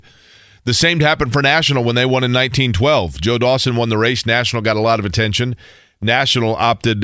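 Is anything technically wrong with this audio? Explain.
No, nothing technically wrong can be heard in this speech recording, as the signal stays intact and stable throughout without any audible defect.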